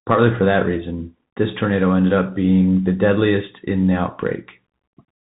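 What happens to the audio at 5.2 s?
At 5.2 s the speech still carries the Bluetooth CVSD headset codec that runs through the whole clip. Its one-bit delta coding, which fits a 64 kbit/s stream, leaves the sound band-limited below 4 kHz, with scratchy sibilants and granular hiss.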